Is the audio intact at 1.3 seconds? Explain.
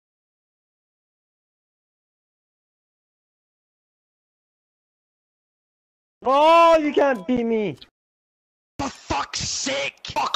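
Yes, the audio is intact at 1.3 seconds, with no dropout, click, distortion or other fault audible at that point.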